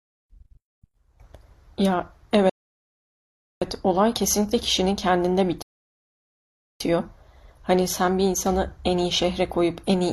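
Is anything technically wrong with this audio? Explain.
Yes. There are two rebuffering stalls, at 2.50 to 3.62 s and at 5.62 to 6.80 s. In each, the player used up its downloaded audio and waited for more data, so the speech cuts to silence and then picks up exactly where it stopped. No sound is lost, but the gaps add about 1.1 s and 1.2 s of dead air, breaking the flow of the speech twice.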